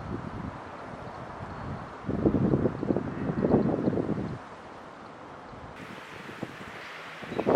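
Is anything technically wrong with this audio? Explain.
Yes. From 5.76 s to the end at 7.56 s, the sound jumps abruptly higher and hurried, pitched up by roughly ten semitones. This is a section at the wrong speed, likely played back 1.81 times too fast against the wrong clock, so pitch and tempo rise together.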